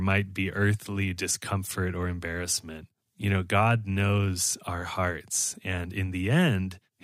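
No dropouts, glitches or level faults turn up anywhere in the recording.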